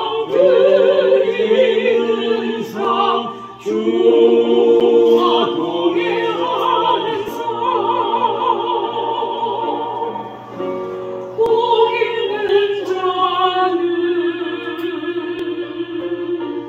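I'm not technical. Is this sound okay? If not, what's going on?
No. There are two kinds of fault.

Clock drift buffer slips: about every 4.2 seconds, from 2.85 s to about 15.4 s, a regular click occurs, roughly four in all. This is likely two devices running on slightly mismatched clocks, so a tiny block of sound periodically gets dropped or repeated.

CD skip: at 4.80 s and 12.48 s the sound cuts out for a few thousandths of a second, then carries on from a slightly different spot, as when a disc player's laser jumps tracks.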